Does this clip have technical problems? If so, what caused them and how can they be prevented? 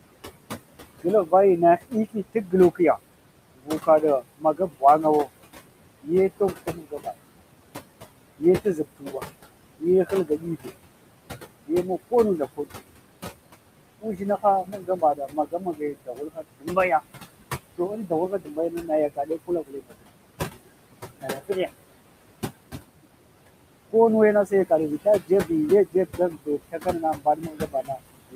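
Yes. Noise suppressor artifacts run throughout: the room noise sits only about 12 dB below the speech, and the suppressor pulls it down by about 21 dB frame by frame, so the residual noise sinks between the words and rises under them. Prevent this by lowering the room noise at the source and using a gentler suppression setting.

Speech cut by the noise suppressor occurs at 1.02–7.07 s, 8.38–10.71 s, 11.66–12.72 s, 13.99–16.77 s, 17.78–20.26 s, 21.22–21.56 s and from 23.91 s to the end. Quiet speech is mistaken for noise and drops by up to about 22 dB, so it sounds swallowed. Prevent this by raising the microphone level relative to the noise and using a less aggressive suppressor threshold.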